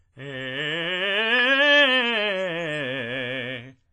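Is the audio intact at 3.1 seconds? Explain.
No. At 3.1 s, as across the whole music clip, WMA compression is audible: nothing above 10.6 kHz, with ringing, washy smearing and hiss that breathes with the signal. This likely comes from a transform codec spreading quantisation noise over long blocks and zeroing weak lines, which fits a low bitrate near 24 kbps.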